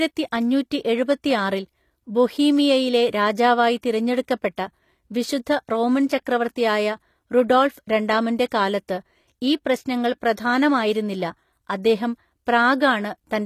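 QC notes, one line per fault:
Throughout, HE-AAC compression, likely the cause of the plainly audible damage to the upper range of this speech. The treble does not sound like the original. It seems rebuilt from copies of lower bands, shaped only by a coarse envelope. Harmonics then fail to line up where the coded range meets the rebuilt range. The s sounds come out gritty, metallic or lispy. The damage fits a low bitrate of about 24 kbps.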